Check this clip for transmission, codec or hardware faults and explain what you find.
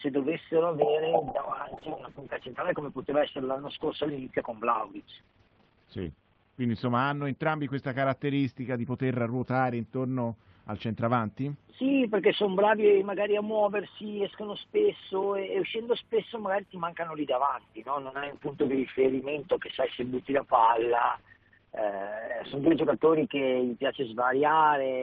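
Two call bitrate drops, 1.26–16.09 s and 18.09–25.03 s. A falling bandwidth estimate starved the encoder, consistent with 40 to 8 kbps, narrowing audio from 20 kHz to 6 kHz. It sounds muffled and rough, worst for about 4.7 s each time.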